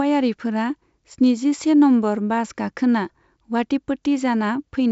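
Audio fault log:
No faults are heard in the speech. The G.722 wideband telephone coding carries the speech up to about 7 kHz with at most a faint hiss in the upper band, which fits its full 64 kbit/s mode.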